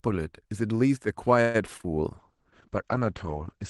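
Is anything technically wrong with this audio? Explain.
Yes. The speech has two separate faults.

From 1.41 to 1.87 s there is repeated packet loss, giving a robotic sound. Audio keeps dropping out in quick succession. Each hole is patched by stretching the last bit of sound forward. About 180 ms is filled this way, and about 60 ms is simply missing. The longest gap lasts about 0.13 s. Roughly two-fifths of the stretch is patched. It sounds choppy, with fragments gone.

From 2.18 s to the end there is a call bitrate drop. The call's bandwidth estimate fell, so the Opus encoder had far fewer bits to spend. The coarser coding fits a fall from about 32 kbps to 9 kbps. The audio band also shrinks, with the top cut-off falling from 12 kHz to 8 kHz. The lowest quality lasts about 1.33 s. The speech turns rough, watery and muffled, and stays that way to the end.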